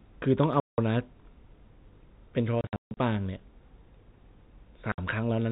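At 0.6 s the speech drops into dead silence for 0.18 s, at 2.61 s a 0.36 s stretch is chopped by several gaps (the longest 150 ms), and at 4.92 s a 60 ms hole appears: packet loss filled with silence. Gap lengths are multiples of 30 ms, which fits 30 ms packets. A waveform shows flat silent runs with abrupt cuts, and a spectrogram shows blank vertical bands across the band-limited telephone spectrum.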